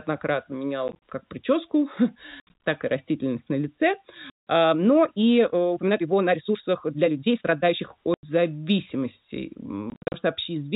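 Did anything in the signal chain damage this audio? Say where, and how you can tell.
Yes. Network stage: packet loss filled with silence at 0.88, 2.4, 4.3, 8.14 and 9.9 s. Hard-edged holes chop the speech, in steps that fit 10 ms packets.

Processing stage: a time-stretched section from 4.68 to 7.80 s runs 1.58 times faster at unchanged pitch, sounding rushed, likely from software dropping short pieces.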